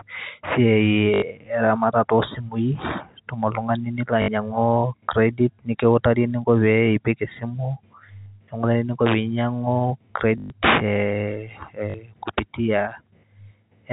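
Short robotic stutters break the speech five times: at 1.14 to 1.22 s, just before "eramata too simui itum"; at 4.22 to 4.28 s; at 8.22 to 8.26 s, between "epik esimu" and "nekiutakini eninko pee inyang'u"; at 10.38 to 10.5 s, the longest at 120 ms; and at 11.9 to 11.94 s. Each is packet loss with the last packet repeated. The receiver replayed its last packet until new ones arrived, and the repeats seldom follow the pitch, so the runs buzz at about 50 Hz, which fits 20 ms packets. The band-limited telephone sound of the G.711 coding comes through beneath them.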